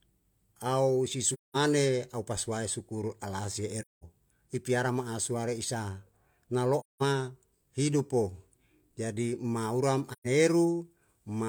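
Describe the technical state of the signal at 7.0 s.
At 7.0 s the signal sits inside an AAC frame loss with muting, running from about 6.80 s to 7.03 s. For roughly 0.21 s the speech drops to silence, a gap that fits about five consecutive lost frames. The decoder replaced the missing frames' spectral content with zeros, and the overlapping transform windows taper the audio down into the hole and back up out of it, so the dropout has soft edges rather than an abrupt cut.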